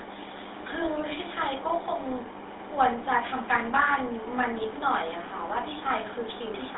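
Throughout, the speech sounds buzzy and gravelly within 300 Hz to 3.7 kHz: GSM full-rate coding rebuilds it from a vocal-tract model and sparse, regular pulses.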